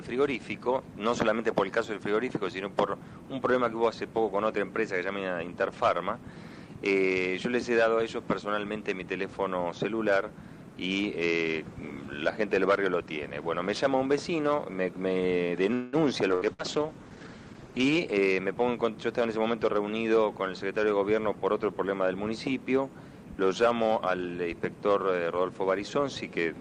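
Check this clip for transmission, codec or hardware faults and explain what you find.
Four kinds of fault turn up, clustered between about 15.7 and 19.8 s.

A call audio freeze runs from 15.73 to 15.96 s. The sound stalls and is carried on as a fading buzz or hiss for about 0.19 s, then picks up exactly where it stopped. The likely cause is late packets draining the jitter buffer. What separates this from packet loss is that nothing is skipped. A pause is inserted, and the playback delay grows by the length of the gap.

A call bitrate drop follows from 16.34 to 18.23 s. The encoder falls from 48 to 12 kbps and stays at the lowest rate for about 1.8 s. Opus at that rate codes coarsely and trims the top end, so the sound turns rough, watery and dull. Unlike the loss bursts inside this span, it is a continuous change in texture rather than a break.

Two bursts of packet loss land at 16.35 to 16.44 s and 16.53 to 16.62 s. 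In each, roughly 60 ms of audio never arrived. The receiver held the last sound as a decaying buzz or hiss, then jumped ahead. Where the freeze resumes from the same point, these resume later on, so a short slice is genuinely gone.

A jitter buffer speed-up runs from 17.92 to 19.76 s. After the earlier delays, the receiver trimmed many tiny pitch-period pieces to shed excess buffered audio, roughly a fifth of a second in total. Playback runs at about 109% and sounds hurried. The pitch stays the same, which distinguishes it from a simple change in playback rate.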